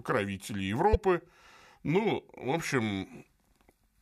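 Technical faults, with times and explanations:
0.93–0.95 s, damaged data in a compressed stream: a 24 ms glitch cuts into the speech where corrupted bytes made the decoder misread frames and hunt for the next header.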